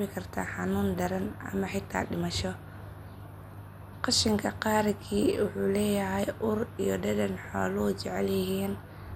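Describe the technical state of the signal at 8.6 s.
At 8.6 s the speech carries the same MP2 compression damage heard across the whole clip. Nothing survives above 16.6 kHz, and the upper sub-bands flicker in and out while the remaining ones are coarsely quantised, giving a dull, gurgling, granular texture. The damage is plainly audible and fits a rate near 80 kbps. Unlike a plain low-pass filter, it adds grain and band flicker rather than only removing top end, and the likely cause is MPEG Layer II encoding.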